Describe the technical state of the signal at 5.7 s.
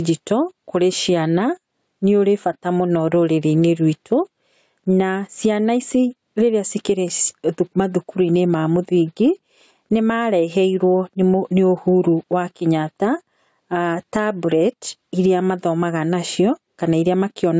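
At 5.7 s you're hearing gain pumping, and it runs the whole clip: the gain swings by around 15 dB, pulling down under each louder speech peak, squashing the dynamics. The likely cause is mic gain set far too high, with a fast limiter clamping down.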